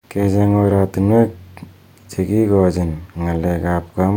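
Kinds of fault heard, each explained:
No faults heard in this speech clip.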